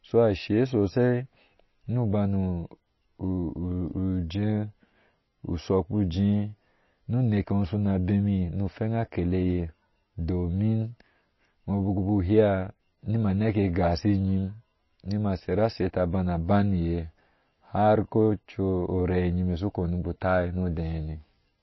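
A speech clip with MP3 compression damage throughout. Nothing is heard above 5.8 kHz, so sibilants sound dull. Plainly audible swirly, watery artefacts come from weak frequency lines switching on and off. This likely points to a low bitrate, around 23 kbps.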